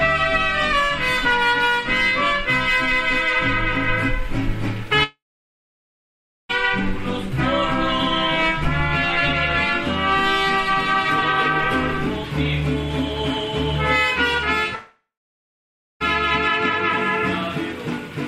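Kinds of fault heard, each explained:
Long network dropout: at 5.03–6.51 s and 14.75–16.02 s the sound trails off as a fading buzz, falls silent for 1.31 s and 0.94 s, then resumes with 1.46 s and 1.26 s lost, likely from audio that never arrived.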